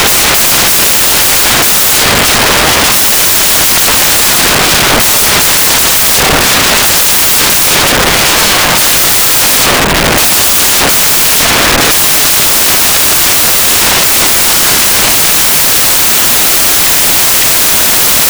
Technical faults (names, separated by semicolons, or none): samples built from the wrong bytes